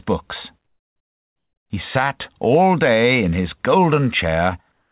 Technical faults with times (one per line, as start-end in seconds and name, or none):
4.72-4.92 comfort noise in place of the background